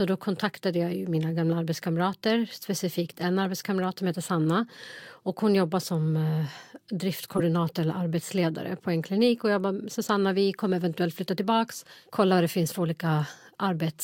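A corrupt frame decoded at 7.36 to 7.41 s, just before "eller arbetsledare på en", gives a brief glitch peaking around -15 dBFS. Damaged bits in a couple of compressed frames were decoded anyway, misplacing energy across frequencies for about 50 ms.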